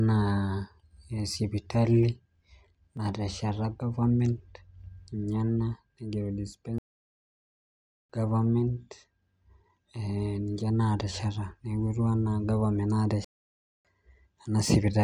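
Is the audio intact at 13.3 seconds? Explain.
No. At 13.3 seconds the audio falls inside a playback stall running from 13.24 to 13.85 s. The player likely ran short of incoming data or had its output thread held up, so for about 0.60 s it had nothing to send to the output. The speech cuts off abruptly mid-flow into dead silence, then resumes once playback recovers, leaving an unnatural gap rather than a pause anyone would make while talking.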